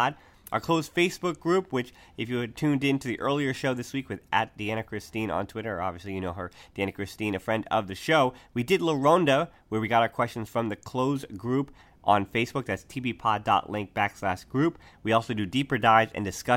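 No technical faults can be heard at any point in the speech.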